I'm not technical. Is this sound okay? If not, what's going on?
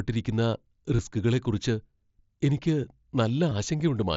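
No, not quite. There are two brief gaps from concealed Bluetooth headset packet loss, at 0.97 to 0.99 seconds and at 3.5 seconds. Small bursts of audio between the headset and the phone went missing, about 22 ms and 15 ms of it. The phone filled each hole by repeating a closely matching bit of the sound just before it. That makes each spot a buzz or flutter rather than a clear break.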